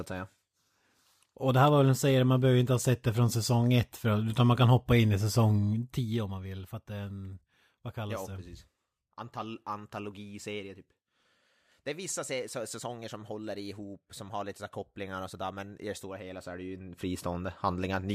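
A level change applied in coarse steps with no smoothing, about 200 a second, pulls this speech clip down by around 15 dB between 5.56 and 6.42 s. Each step leaves a small click, so a zipper noise ticks over the speech throughout the fade.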